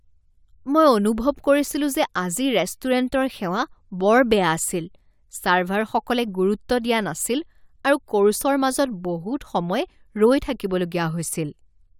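Nothing stood out on listening to this speech recording.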